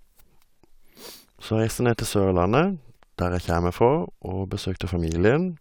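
No technical faults are audible.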